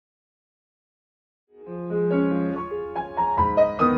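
Nothing technically wrong can be heard in the audio. The smooth fade-in brings the level up gradually from around one and a half seconds and reaches full level at 2.6 s, with no click or hard edge.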